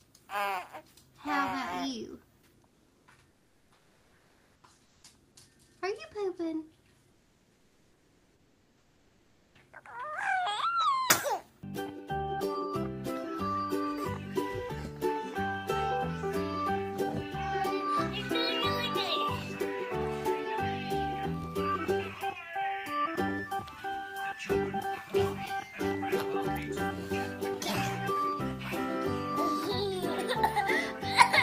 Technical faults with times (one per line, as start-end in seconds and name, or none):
2.67-5.03 comfort noise in place of the background
7.11-9.55 comfort noise in place of the background